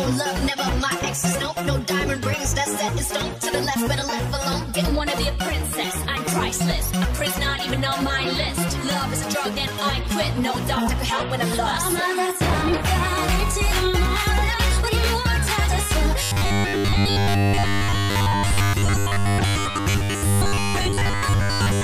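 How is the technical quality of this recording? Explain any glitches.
The recording has one clear glitch, near the end. From 16.2 s to 21.8 s there is robotic sound from repeated short buffers: new audio likely arrived too seldom, so 10 ms chunks were replayed over most of the gap, stamping a rigid 100 Hz metallic buzz onto the sound.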